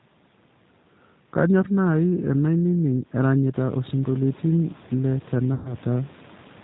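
Throughout, the speech passes through a G.729 codec, which rebuilds it from a vocal tract filter, a pitch predictor and a few pulses per frame, consistent with an 8 kbit/s stream. Everything above 4 kHz is gone, and the voice sounds plainly rough and synthetic.

From 5.54 to 5.75 s, VoIP packet loss is concealed by the speech codec. About 110 ms of audio never arrived, so the decoder stretched its last pitch and filter into a fading sound, and the voice stays weak or distorted as it recovers.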